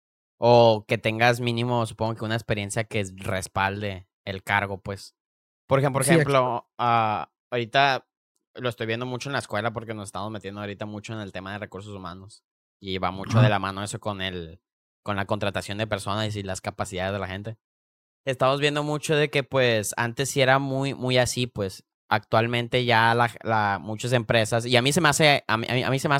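A speech clip with one fault: at 11.14 s, between "estamos metiendo ahorita mucho" and "en el tema de", there is a single sharp click, likely caused by dropped samples. A fraction of a millisecond of audio goes missing, so the waveform jumps straight to a later value. Unlike a dropout, no sound is audibly lost and there is no gap or silence, only one instantaneous tick that shows as a thin vertical line across the spectrum.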